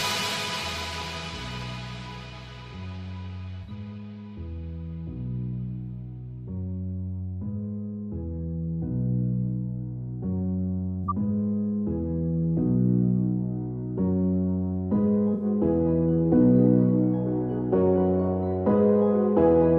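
At 3.63 to 3.70 s, 11.04 to 11.11 s and 15.34 to 15.44 s, a corrupt frame was concealed. The decoder detected damaged data and papered over it, which fits a few lost frames. Each time three frames were hit, and the decoder covered them by muting or with a sign-scrambled copy of the last good spectrum.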